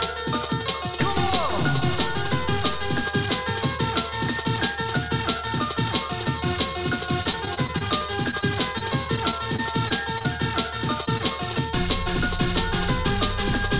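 From 7.24 to 7.83 s and again from 8.24 to 10.27 s, repeated packet loss (robotic sound) chops the audio into a stutter. Over a dozen short dropouts, none longer than 25 ms, are each patched by extending the previous sound. Unlike a single dropout, the holes follow in close succession. At 11.05 to 11.09 s and 11.18 to 11.22 s, short concealed packet loss leaves two isolated smears or wobbles of about 20 ms each, rather than a sustained robotic texture. Throughout, the call path passes nothing above 4 kHz, which fits G.711 A-law at 64 kbps.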